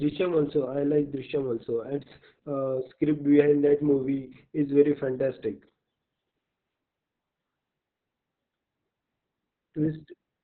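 Opus voice compression runs throughout the speech, from the first second to the last. The coder appears to be in its SILK linear-prediction mode with the band cut to narrowband, so nothing above about 4 kHz survives. The damage is heavy, which fits a bitrate around 6 kbps with long frames, perhaps 60 ms. With so few bits, the excitation is coded coarsely, leaving the voice muffled, hoarse and faintly robotic.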